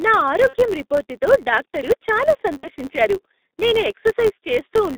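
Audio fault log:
Throughout: G.723.1 codec at roughly 6.3 kbit/s, band held to about 150 Hz to 3.7 kHz, so the speech comes out muffled, hoarse and smeared at the consonants.
Throughout: filter restarted on every block, each block kicks off with a little transient, giving a level-following buzz near 94 Hz, which fits a 512-sample block.
0.47 to 0.56 s and 2.57 to 2.70 s: VoIP packet loss concealed by the speech codec, about 60 ms dropped each time; the decoder stretches the last sound into a fading buzzy tone or coloured noise, just before "రిపోర్టుతో డాక్టరు చాలా" in the first case and just after it in the second.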